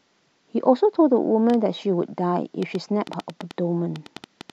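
From 1.50 s to 4.51 s a train of clicks ticks over the speech, about five per second at an uneven pace, roughly fifteen sharp, similar-shaped pops in all. They stand a few decibels above the voice and are heard in the gaps between phrases too. The cause is likely interference from nearby equipment or a faulty connection or power supply, injecting brief pulses into the signal path at irregular intervals.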